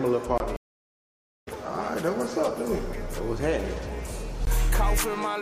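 A block of digital silence at 0.38 to 0.40 s and again at 4.45 s: the output buffer likely went unfilled, leaving 23 ms and 17 ms holes. The first fits a 1024-sample buffer. A stream reconnect from 0.56 to 1.48 s: the connection dropped, about 0.9 s of silence followed, and the audio resumed roughly 0.7 s further on.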